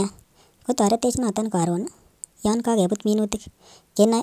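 Wrong sample rate throughout this speech clip: it plays about 1.45 times too fast and roughly 6.5 semitones high, consistent with 22 kHz audio played at 32 kHz.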